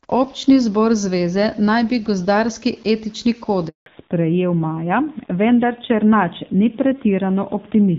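A speech recording whose sound cuts out abruptly at 3.68 s and stays silent until 3.86 s. That 180 ms handover gap happens as the call switches networks and no speech frames arrive during the transfer. From 3.86 s to the end the speech turns dull and rough, with nothing above 4 kHz. This fallback to narrowband drops the call from HD Voice, whose light coding before the switch fits AMR-WB at around 12.65 kbit/s, to a narrowband codec consistent with AMR-NB at about 7.4 kbit/s.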